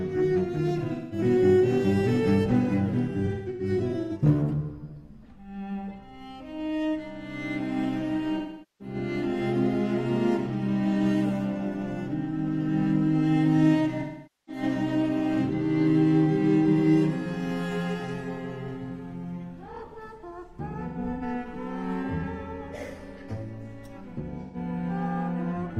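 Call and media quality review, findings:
AAC frame loss with concealment at 0.78–1.18 s, 3.25–4.12 s, 8.37–8.95 s, 14.00–14.62 s, 20.70–21.23 s and 24.41–24.56 s. Symptom: short smeared, noisy, phasey patches where the decoder resynthesises from the last good spectrum. First, second and fifth spans are broken up, with longest runs around 150, 150 and 100 ms. Gap lengths fit roughly 43 ms AAC frames. Probable component: transport/jitter path upstream of the decoder.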